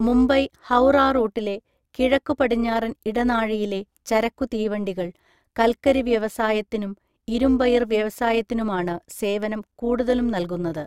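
Overlap-add ripple runs through the whole speech clip, a metallic buzz with extra tones, rippling around 200 Hz with a depth of about 6 dB. The audio was split into windowed frames and rejoined with overlaps that don't sum to constant gain, so the level dips and swells once per frame.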